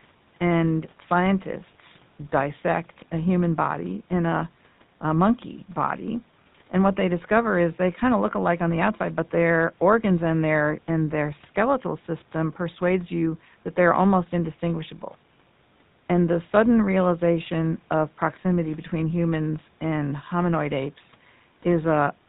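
The speech has been passed through the GSM full-rate codec for its whole length, with damage that is plainly audible and consistent with the 13 kbps original GSM scheme. The codec rebuilds the voice from a vocal-tract model excited by a sparse, regular pulse train carrying only a third of the excitation samples, and it discards everything above 4 kHz. The result is a dull, band-limited voice with a gritty, buzzing roughness running through it.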